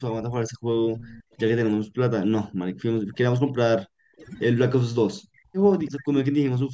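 Overdone noise removal runs through the whole speech clip: strong spectral gating leaves a lowered background with twinkling specks.

Speech suppressed in double talk cuts into the talker at 0.0–1.41 s, 1.76–3.6 s, 3.76–4.23 s, 5.0–5.61 s, 5.9–6.12 s and 6.32–6.74 s. The voice dips by up to about 40 dB or breaks into pieces, likely because an echo canceller turned everything down while both sides spoke.

Echo leak appears at 0.97–1.36 s and briefly at 5.86–5.91 s. A copy of the voice trails by 329 ms at about 20 to 25 dB below the speech, likely loudspeaker pickup that the far side's canceller missed.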